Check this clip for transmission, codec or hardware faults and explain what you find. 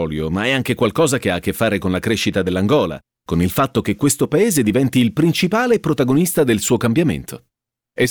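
Two sharp clicks point to dropped samples, at 2.73 s (after "fare con la crescita") and 4.68 s (before "il principale"). A fraction of a millisecond likely went missing each time, so the waveform jumps abruptly, producing a brief click with a thin broadband spectral line.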